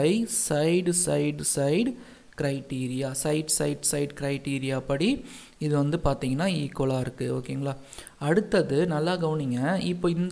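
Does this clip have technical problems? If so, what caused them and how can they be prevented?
No, there are no technical problems to fix here.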